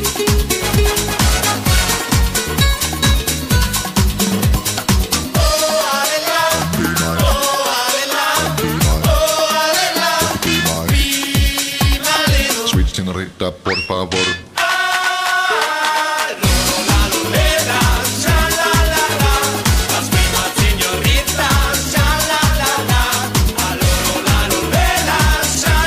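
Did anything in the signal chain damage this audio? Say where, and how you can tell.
No, nothing in the signal chain damaged this audio. No stage of the chain can be heard altering the sound at any point in the clip.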